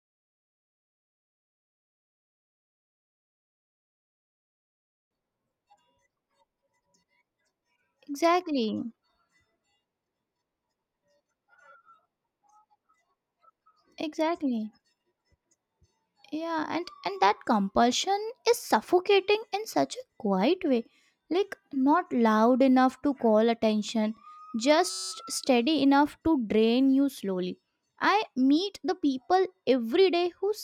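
At 24.90 s the speech gives way to a system hang loop lasting until 25.12 s. The playback side stalled while the audio hardware kept replaying the same 5.33 ms stretch of its ring buffer, which fits a 256-sample buffer, about 40 times over. Because the loop is so short, it sounds like a steady buzz at 188 Hz rather than a stutter. Speech resumes afterward with essentially nothing missing.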